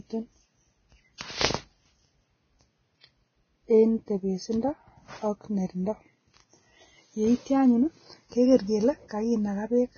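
Throughout the speech, hissy, grainy treble with nothing above 6.5 kHz points to heavy Vorbis compression, likely at around 17 kbps, turning fine detail into noise. From 1.18 to 1.21 s, pre-echo: block-spread quantisation noise leaks about 31 ms ahead of a sharp attack, heard as a brief hiss and softened onset.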